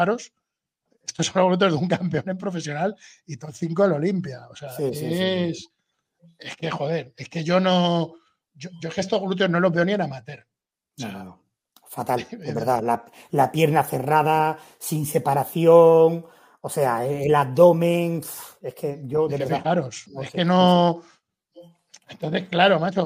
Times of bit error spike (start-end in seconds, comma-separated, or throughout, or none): 22.22